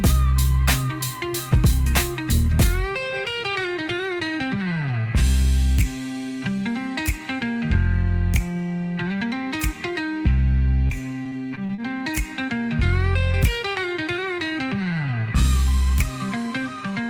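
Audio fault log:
10.87–11.80 s, repeated packet loss (robotic sound): six short holes, none longer than 36 ms, open in quick succession, and each is papered over by stretching the preceding sound, so about 144 ms of the 160 ms lost is filled with repeated material, roughly a sixth of the span. That rapid restart-and-repeat gives a choppy texture; a single dropout would leave one isolated gap or glitch rather than this stuttering run.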